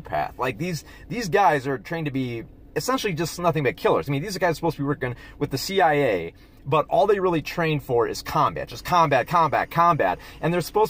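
From 8.72 s to the end there's timecode bleed: linear timecode leaking in from a nearby track or cable. You get a faint chirpy warble flipping between roughly 1 and 2 kHz, sitting about 40 dB under the sound, which fits 24 fps code.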